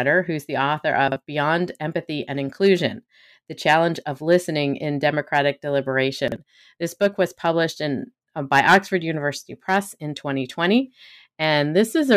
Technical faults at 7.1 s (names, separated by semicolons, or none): none